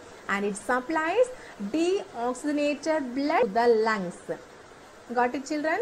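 Short blips at 0.88 s and 3.42 s come from damaged data in the compressed stream: the decoder misreads corrupted frames, loses sync and searches for the next header.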